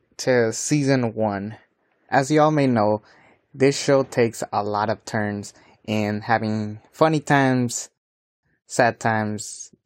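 At 7.98 s, right after "in having funny times", the speech drops into silence for about 0.45 s and then picks up exactly where it stopped, with nothing missing. This is a rebuffering stall: playback ran out of downloaded audio and waited for more, adding time.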